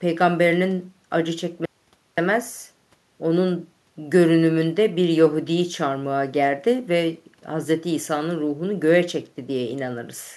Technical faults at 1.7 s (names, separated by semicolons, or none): audio dropout to a faint residue